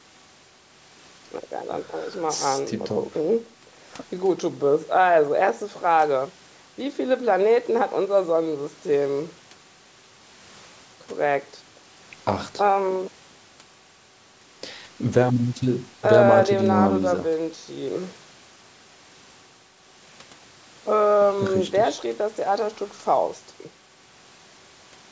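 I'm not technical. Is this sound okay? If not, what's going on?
Yes, nothing is wrong here.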